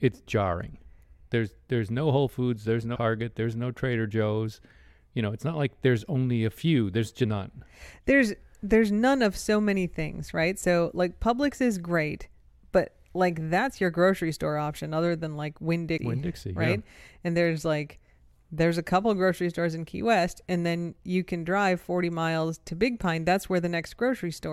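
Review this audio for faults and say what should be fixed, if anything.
Damaged data in a compressed stream: three short stretches of the encoded data were corrupted, so the decoder misread those frames, lost sync and had to search for the next valid frame header before playback could continue. In the speech, each event is heard as a brief chirp or blip: the first from 2.94 to 2.97 s, just before "there's no", then at 7.23 s and at 15.98 s. The fix is to replace the file with a clean copy or re-encode it from an undamaged source.

To prevent it, verify the compressed file with checksums or error detection during transfer and storage, and keep stream metadata from being written into the audio data.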